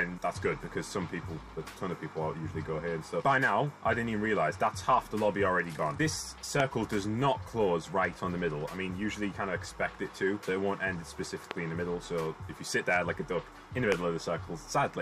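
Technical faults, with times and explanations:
6.60, 11.51 and 13.92 s, loud pop: three single sharp pops, each about 20 ms long and roughly 20 dB above the sound, which carries on underneath. Each is a sudden voltage spike added to the signal, likely from a switch, static discharge or a driver glitch.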